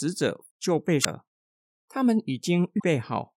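Short glitches break through the speech at 1.01 to 1.06 s and 2.76 to 2.84 s: damaged data in a compressed stream, where corrupted bytes throw the decoder out of sync until it finds the next frame header.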